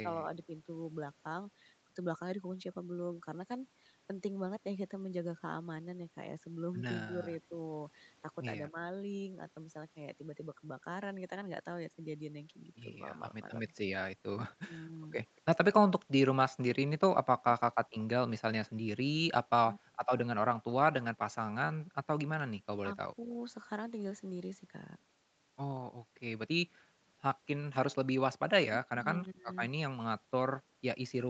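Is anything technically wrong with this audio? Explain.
Yes, the speech has two problems.

Speech suppressed in double talk shows up four times: 0.04 to 0.56 s, 7.05 to 8.86 s, 13.14 to 23.36 s, and 28.68 to 29.48 s. The level of the speech sinks in patches while the far side is likely talking at the same moment. The echo canceller cannot tell the local talker from loudspeaker echo, so it turns both down. The first dip is slight, around 5 dB. The second is deeper, about 15 dB. The last two drop by roughly 40 dB, enough for pieces of speech to vanish.

Echo leak occurs from 14.5 to 15.41 s. A faint copy of the speech trails the original by 236 ms, sitting roughly 35 dB below it. This is likely loudspeaker sound that the far end's echo canceller failed to fully remove, so its microphone sent it back. At that level it is a quiet, delayed ghost of the speech rather than a distinct repeat. Across the clip the sound stops at 8 kHz, which fits a wideband Opus call path.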